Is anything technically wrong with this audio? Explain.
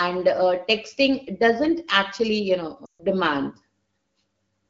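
Yes. From 2.86 to 3.05 s there is a run of lost AMR speech frames, with about 140 ms of speech missing. This fits roughly seven 20 ms frames that failed their checksum after radio errors. The AMR-WB decoder, running at a 12.65 kbit/s wideband rate, conceals each gap by repeating its last good pitch and vocal tract settings at falling gain. The speech drops to near silence within two frames, then resumes weak or rough for a moment.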